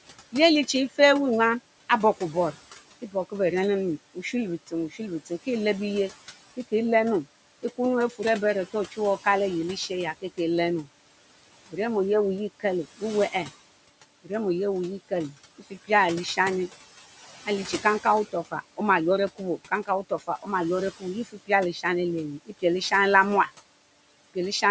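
Noise suppressor artifacts run through the whole of this speech clip. The suppressor pulls down the bands it judges to be steady noise by about 18 dB, frame by frame, so the room noise, which sits about 17 dB below the voice, drops away between phrases and swells back under them. The audio also carries nothing above 8 kHz, consistent with ordinary call microphone processing. Speech cut by the noise suppressor occurs in three spans: 0.32 to 5.47 s, 7.63 to 15.89 s and 17.46 to 24.63 s. In each, roughly half a second in total of soft speech, such as quiet consonants and trailing word endings, was treated as noise and turned down along with the background, by up to about 15, 16 and 18 dB respectively, so those moments sound swallowed or faint.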